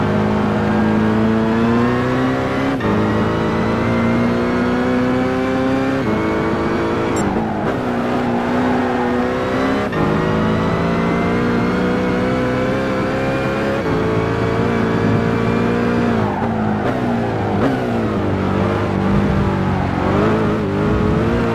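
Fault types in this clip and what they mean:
No technical faults can be heard in this audio.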